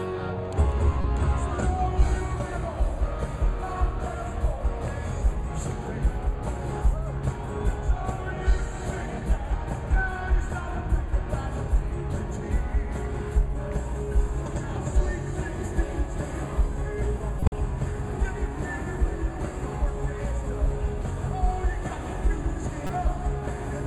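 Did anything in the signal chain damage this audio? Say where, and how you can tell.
Yes, at the codec stage: a corrupt frame decoded at 1.01–1.04 s, 17.40–17.52 s and 22.87–22.90 s. Each is a brief foreign burst, the middle one longest and loudest. Damaged compressed frames were played anyway, misplacing energy across frequencies for each frame's length.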